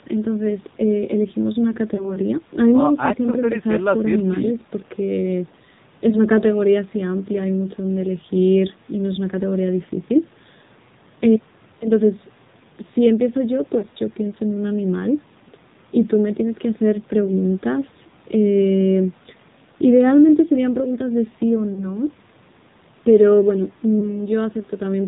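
AMR narrowband mobile codec, throughout: band-limited below 4 kHz with a buzzy, synthetic edge from coarse vocal tract modelling, consistent with roughly 7.4 kbps AMR-NB.

Lost AMR speech frames at 1.96–2.17, 6.10–6.19, 13.78–13.85, 21.74–21.89 and 23.99–24.21 s: the decoder reused old pitch and tract settings at falling gain, giving brief dips and warbles. The third sounds like two consecutive frames lost.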